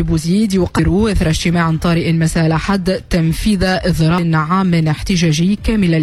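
At 0.75 to 0.80 s, compressed frames are skipped. The decoder drops a run of data, and the audio jumps ahead by about a fifth of a second. That fits roughly four frames of 46 ms.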